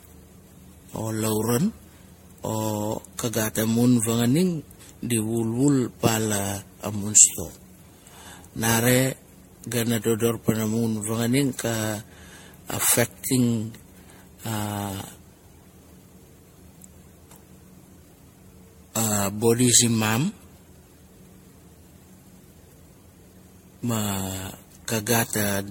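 Generation loss runs through the whole speech clip. It sounds swirly, smeared and hollow, with blurred attacks and nothing above 16.5 kHz. The likely cause is repeated MP3 encoding, about seven passes at what sounds like 64 kbit/s. Each pass adds fresh noise and spectral holes.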